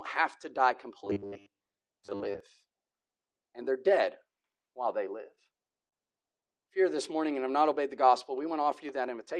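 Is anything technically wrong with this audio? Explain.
Yes, there are three distinct faults in this speech clip.

From 1.04 to 2.40 s there is robotic sound from repeated short buffers. New audio was likely arriving too seldom, so the playback side kept replaying its most recent short slice instead of waiting, and most of the real audio in that stretch was skipped. The steady 100 Hz buzz fits a 10 ms slice being looped. The speech turns rigid and metallic, loosely tracking the syllables under that fixed tone.

From 5.35 to 5.95 s there are repeated stalls (stutter). Packets reached the receiver late or too slowly, and the jitter buffer ran dry four times. Each time the receiver stretched the last sound to bridge the gap, covering 89 ms in total, about 15% of that span, with the longest gap 39 ms. Nothing is lost, but the speech hesitates and catches in small jerks.

From 7.28 to 7.58 s there is a jitter buffer slow-down. 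The receiver was rebuilding its reserve of buffered audio, so it repeated individual pitch periods and pause fragments to buy time, adding 36 ms. Playback drops to about 90% speed while the pitch stays the same. That short passage sounds drawn out and slightly sluggish rather than lower in pitch.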